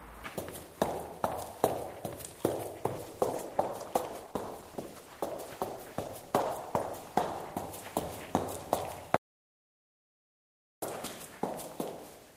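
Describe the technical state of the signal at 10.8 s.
At 10.8 s the signal is in an audio dropout to silence, running 9.16 to 10.82 s. The sound cuts to silence with no room tone, likely from lost input.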